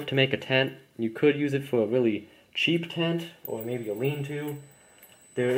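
At 3.48 s a USB whine starts and runs to the end. Bus current in 125-microsecond microframes leaks into the audio, giving a fixed 8 kHz tone, strongest at 16 kHz, well below the signal.

From 5.14 to 5.22 s a corrupt frame decoded. A few damaged compressed frames were played anyway, putting faint misplaced energy into the sound.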